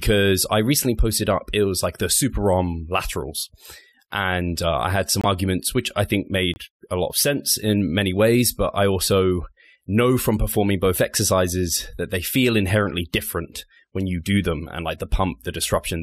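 At 5.21 s, right after "uh I had some", the speech drops into a sudden 40 ms silence, and at 6.54 s, after "which I think", a second 42 ms hole cuts in before "a lot of sense". Both are corrupt frames muted: damaged compressed data was rejected by the decoder and replaced with silence, about two frames' worth each time, with timing intact. A waveform shows a flat line with sharp edges; a spectrogram shows a clean vertical blank band.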